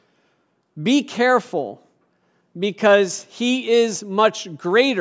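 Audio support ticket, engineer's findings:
No faults found in this recording.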